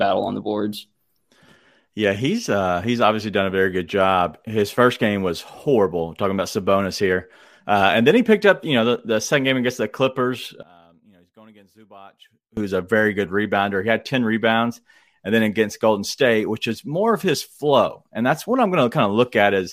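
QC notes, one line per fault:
10.63 to 12.57 s, one channel inverted: the speech drops by about 26 dB and turns faint, recovering just before "a very good rebounder". The likely cause is one stereo channel flipped in polarity, so the centred voice cancels when the channels are summed to mono.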